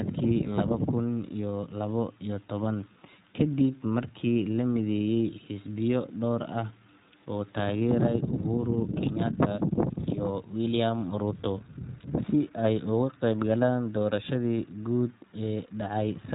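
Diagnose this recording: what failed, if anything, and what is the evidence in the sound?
The codec stage is at fault: the speech runs through the iLBC codec throughout. Nothing above 3.8 kHz survives, and the plainly audible roughness and synthetic edge fit 15.2 kbps coding of 20 ms frames, each excitation coded independently of the last.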